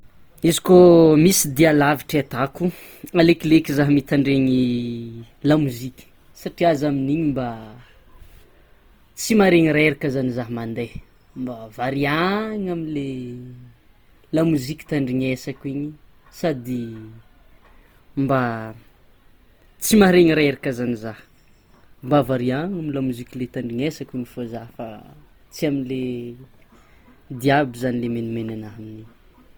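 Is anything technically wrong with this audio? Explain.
Yes. Throughout the speech there is plainly audible codec damage, likely from Opus compression in its music (CELT) mode. The encoder holds each band's energy but, short of bits, fills detail with folded or noise-like content, so the voice sounds grainy, rough and noisy rather than hollow. Unlike MP3, there is little swirling or watery warble, and the bandwidth stays full, reaching 20.2 kHz, at a rate of 24 kbps.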